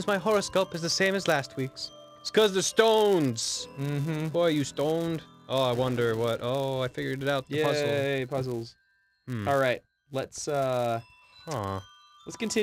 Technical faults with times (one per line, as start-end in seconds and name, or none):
0.00-12.62 filter restarted on every block